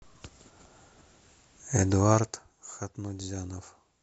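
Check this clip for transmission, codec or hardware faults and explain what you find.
One fault is audible. Zipper noise from 2.04 to 2.53 s: a drop of about 10 dB is applied in unsmoothed steps, roughly fifty a second, each leaving a small click heard as zipping over the speech.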